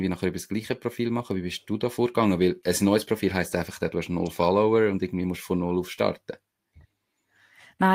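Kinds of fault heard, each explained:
No kinds of fault are heard in this speech clip.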